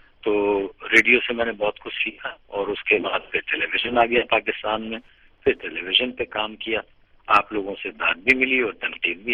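From 3.70 to 5.88 s there is Wi-Fi interference, a very faint ticking repeating every 102.4 ms, rectified from a nearby radio's beacons.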